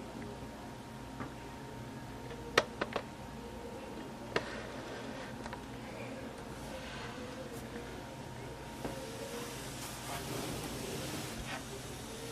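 There are no technical faults to describe, so there is nothing to place in time order.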